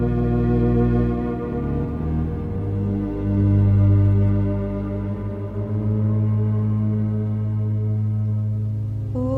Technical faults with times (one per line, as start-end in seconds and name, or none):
2.47-4.37 call bitrate drop